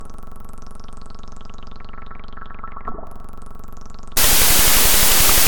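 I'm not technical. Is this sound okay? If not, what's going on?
No. From 4.17 s to the end, the audio turns into loud noise with the real sound buried underneath, playing at half speed and pitched down. That's a wrong sample width fault: the data was read in the wrong-sized chunks, which fits 32-bit float audio being read as 16-bit samples.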